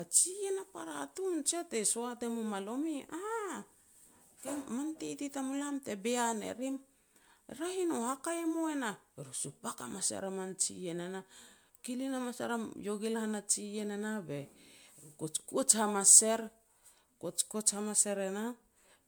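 Throughout, the speech sounds swirly, smeared and hollow, with blurred consonant attacks, likely generation loss from about five MP3 passes; a spectrogram shows accumulating holes below a 20.1 kHz ceiling, fitting 128 kbit/s.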